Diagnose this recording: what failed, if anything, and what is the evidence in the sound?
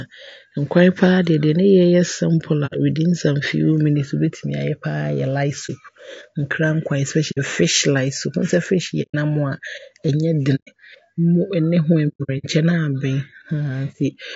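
Throughout, the speech sounds rough and grainy, with a noisy haze between the harmonics and a thin, somewhat synthetic top band. The fault sits at the codec stage: this is most likely low-delay AAC compression, AAC-ELD as used on video calls. Its short analysis frames cannot resolve pitch harmonics finely, so each one costs more bits. At a rate that fits roughly 32 kbps, too few bits remain to keep the spectrum clean.

Over a network or storage path, the sound repeatedly fades into soft-edged silent holes or brief dips: about 60 ms at 2.66 s, 30 ms at 5.66 s, 60 ms at 7.31 s just before "fish light", and 120 ms each at 9.02 s and 10.55 s. From 12.08 to 12.46 s, about 240 ms of gaps are scattered, the longest near 100 ms. This is AAC frame loss with muting. The decoder zeroed each missing frame's spectrum, and overlapping windows taper the edges.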